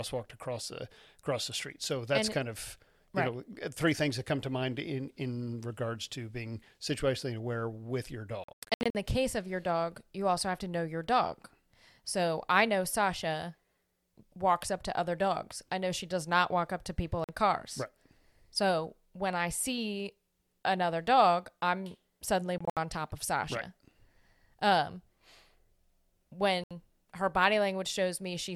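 Speech drops to silence at 8.44–8.95 s, 17.24–17.29 s, 22.58–22.77 s and 26.64–26.71 s, then resumes as if it had kept playing. The first and third gaps are broken into several holes. This is likely Bluetooth dropout, where packets arrived too late and were discarded.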